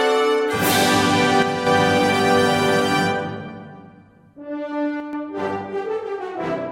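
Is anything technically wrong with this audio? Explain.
Yes. From 1.42 to 1.67 s and from 5.00 to 5.13 s the music suddenly drops about 6 dB, likely one channel dropping out. With one side lost, the mono sum halves, so the waveform shows abrupt, flat-edged dips and the spectrogram dims evenly across all frequencies.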